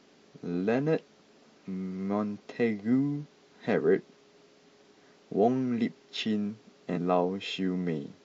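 At 6.92 to 6.98 s, compressed frames are skipped: the speech jumps ahead about 200 ms, consistent with four 46.4 ms frames.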